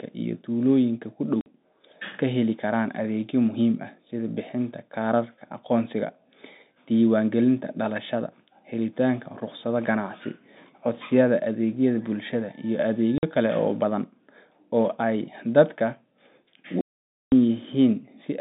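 Hard-edged dropouts cut the speech at 1.41 s and 13.18 s, each 50 ms, then a 510 ms hole from 16.81 to 17.32 s. This is packet loss filled with silence, with gap lengths that fit 10 ms packets, over narrowband G.711 telephone coding.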